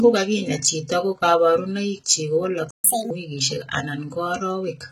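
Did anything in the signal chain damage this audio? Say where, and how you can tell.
Yes. The whole clip sounds dull and smeared, with the swirly artefacts of heavy compression. This is low-bitrate audio saved at a high bitrate, likely a very low-bitrate encode, such as 16 kbit/s HE-AAC, later re-encoded as high-bitrate MP3 that cannot restore the lost detail.

At 2.71 s, right after "chito ko kaparunaik chik", the sound cuts out for 132 ms and resumes at 2.84 s. This is a playback stall at the player's buffer: output went silent until the player recovered, likely because it ran out of data or its thread was blocked.

From 2.84 to 3.11 s the sound rushes and rises in pitch, running 1.5 times faster and about seven semitones higher, then settles. This is catch-up at higher speed: after the stall, the playback stage resamples its backlog faster to regain the lost time.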